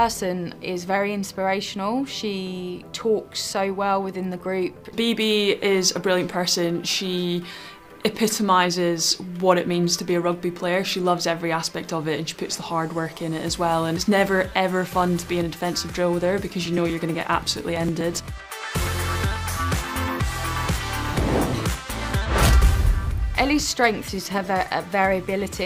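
Periodic USB or driver dropouts run from 16.41 to 18.87 s: every 0.123 s, about 2 ms of audio is skipped as the bus or driver stalls. Around twenty small gaps splice the signal together, producing a steady ticking at roughly eight per second.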